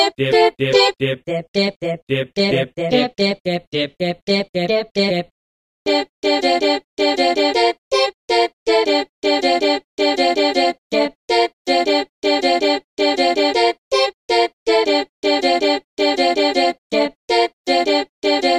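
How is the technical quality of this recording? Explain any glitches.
Nothing glitchy turns up anywhere in the recording, so there's really nothing to explain here.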